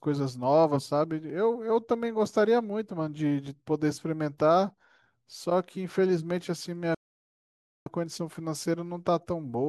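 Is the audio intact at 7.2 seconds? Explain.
No. At 7.2 seconds the speech has stopped dead, part of a silent gap from 6.95 to 7.86 s, about 0.91 s long, before it carries on. This playback stall likely comes from the player running out of data or its thread being blocked.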